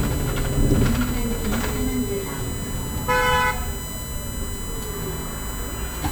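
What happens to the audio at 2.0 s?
At 2.0 s a steady, fixed-pitch whine sits under the sound, only about 10 dB down, built on 1 kHz and loudest at 8 kHz. It runs through the whole clip. This is USB whine: the bus's 1 ms frames and 125-microsecond microframes draw pulsed current that leaks into the audio through power or ground.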